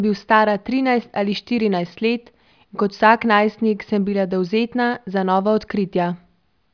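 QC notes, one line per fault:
No technical faults were detected anywhere in the signal.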